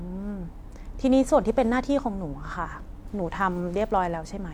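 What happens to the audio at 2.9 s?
Nothing goes wrong at 2.9 s: the speech continues intact through that moment, with no dropout, click, distortion or other audible fault.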